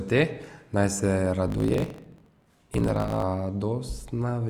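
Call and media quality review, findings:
Block size mismatch (truncated), 1.46 to 3.23 s: 50 Hz buzz, speech running about 1.16x fast with timbre intact. Probably a buffer hand-off where writes, consistent with 1024-sample blocks, are longer than reads, so each block's tail gets dropped.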